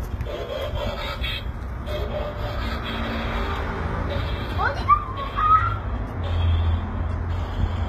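Throughout, the audio was likely squeezed through HE-AAC compression at a very low rate, consistent with about 20 kbps, with the treble rebuilt from copied lower bands. That upper range sounds plainly gritty and metallic, and nothing remains above 14.9 kHz.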